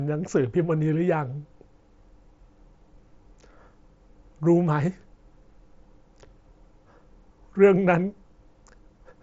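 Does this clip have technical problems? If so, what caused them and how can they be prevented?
No, the speech is band-limited with nothing above about 7.7 kHz, which fits a wideband Bluetooth headset link (mSBC) working as designed, and there is nothing to fix or prevent.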